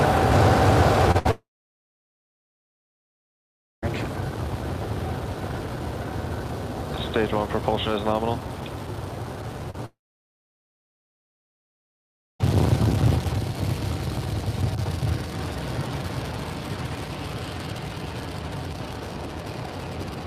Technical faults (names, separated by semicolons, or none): short concealed packet loss; burst of packet loss; long network dropout